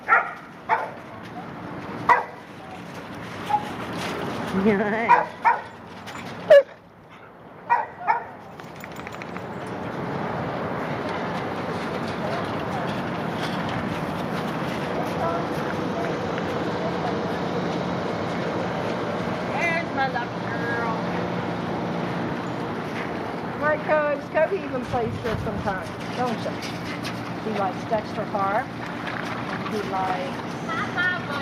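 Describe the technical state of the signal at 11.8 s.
The signal is intact at 11.8 s, with no technical fault audible at that moment.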